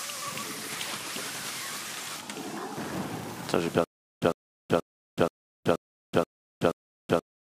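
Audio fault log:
3.84 s to end: stutter with silent gaps. A 103 ms burst repeats seven times, each followed by about 376 ms of dead digital silence, so it returns every 479 ms with machine-like regularity until the clip ends. The likely cause is a stalled player or stream replaying its last buffered fragment on each retry and then running dry. Unlike random dropouts, the returning burst is identical each time, and unlike a seamless loop, true silence separates each repeat while the intervening audio is lost.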